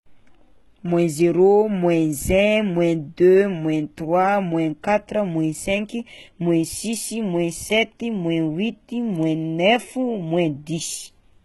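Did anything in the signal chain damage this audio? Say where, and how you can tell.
Yes, at the codec stage, likely HE-AAC at a very low bitrate near 16 kbps. Throughout the speech, nothing sounds above 11.8 kHz. The treble is rebuilt by copying lower bands upward, so harmonics misalign and s sounds turn gritty, metallic or lispy.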